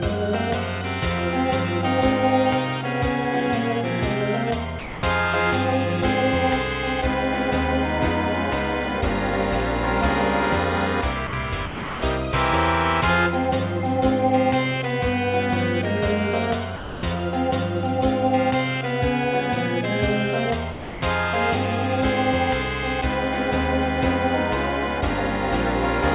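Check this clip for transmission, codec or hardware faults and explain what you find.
There are five short gaps, each filled with steady background noise. They occur at 4.79 to 5.03 s, 11.27 to 11.33 s, 11.66 to 12.02 s, 16.76 to 17.03 s and 20.72 to 21.02 s, and they last from 60 to 360 ms. This is likely sound dropped by the voice detector. The sender judged the audio to be background and stopped transmitting. The receiver then played comfort noise until transmission resumed. The band stops at 4 kHz throughout, which fits a narrowband telephone codec on the call path.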